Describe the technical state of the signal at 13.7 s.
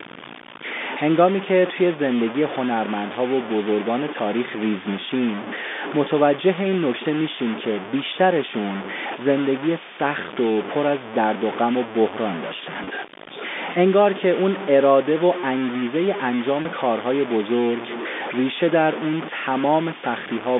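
At 13.7 s the speech carries heavy, grainy distortion that follows its level. This is most likely low bit depth without dither, present for the whole clip rather than just this moment. With only about 4 bits, truncated, the error rides only about 10 dB below the signal. Quiet stretches sputter or fall silent. The waveform would show coarse staircase steps on a few levels, and the spectrogram broadband grit tracking each syllable, inside the 200 Hz to 3.6 kHz telephone band.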